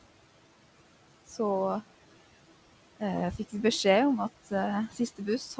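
Noise suppressor artifacts run through the whole clip: the suppressor treats the steady room noise, which sits about 17 dB below the speech, as something to remove frame by frame and pulls it down by about 17 dB. The background drops away in the pauses and swells back under the voice. The G.722 call path carries the audio with nothing above 8 kHz.

Speech cut by the noise suppressor occurs at 4.42 to 4.52 s and again at 4.88 to 5.0 s, each lasting roughly a tenth of a second. Here the suppressor mistook quiet parts of the speech for noise and turned them down with the background, by about 12 dB and about 13 dB respectively. Those stretches sound swallowed and faint.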